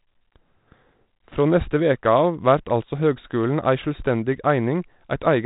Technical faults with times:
none

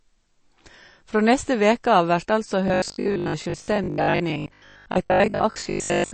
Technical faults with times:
0.00-6.13 MP3 compression
2.68-6.13 robotic sound from repeated short buffers

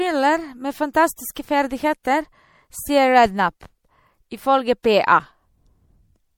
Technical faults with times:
0.00-6.38 MP3 compression
1.35 pre-echo
2.03 pre-echo
4.83 pre-echo

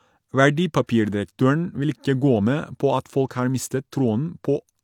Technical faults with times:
none

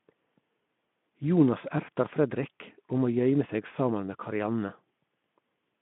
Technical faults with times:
none

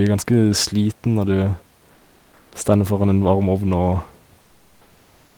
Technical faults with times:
1.93-2.47 comfort noise in place of the background
4.45-5.35 comfort noise in place of the background

